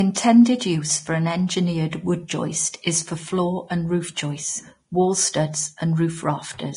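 Speech, likely heavily Vorbis-compressed at a bitrate near 30 kbps: nothing remains above 10.6 kHz, and the coarsely quantised treble sounds hissy and grainy throughout.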